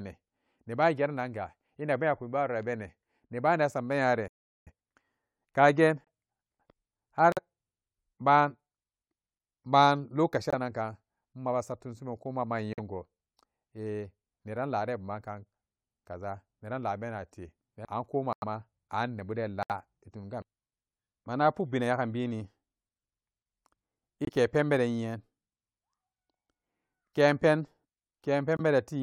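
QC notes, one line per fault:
4.28–4.67 s, playback stall: the speech halts mid-flow for about 0.39 s of dead silence, likely because the player ran dry of buffered data or its thread was blocked. A waveform shows a flat gap, and the spectrogram shows a clean blank column with hard edges.
4.67–5.05 s, time-compressed catch-up: once output resumes, the player drains its backlog by cutting and cross-fading short slices, so about 0.38 s of speech runs at twice normal speed with unchanged pitch. The spectrogram shows harmonics at normal spacing with syllables squeezed together and small seams.
6.05, 7.32, 10.50, 12.73, 18.33, 19.63, 24.25 and 28.57 s, corrupt frame muted: abrupt holes of about 40 to 110 ms, sized like two to four codec frames, where damaged frames were rejected and replaced with silence. Timing stays intact. Each shows as a sharp-edged blank gap.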